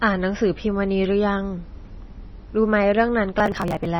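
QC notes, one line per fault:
throughout: MP3 compression, likely at a low bitrate near 24 kbps. Nothing above 5.9 kHz survives, leaving the speech dull and watery with swirling sibilants. A spectrogram shows a hard ceiling at 5.9 kHz and patchy, flickering high bands below it.
3.40–3.85 s: processor overload crackle. Audio buffers were repeatedly skipped, which fits roughly 10 ms buffers with about thirty missed, so the speech tears into gritty crackle. The waveform shows many tiny hard-edged gaps, and the spectrogram shows vertical broadband clicks.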